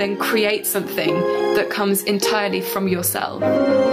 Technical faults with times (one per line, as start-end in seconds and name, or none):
0.00-3.92 gain pumping